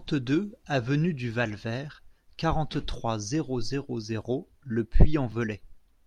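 At 5.32 s the speech jumps slightly forward, the mark of a dropped buffer (overrun). Only a few milliseconds of sound disappear, and there is no gap: the material on either side is butted together, likely because the samples weren't read out before the hardware overwrote them. On a waveform the trace breaks step at that instant; a spectrogram shows a thin vertical broadband line.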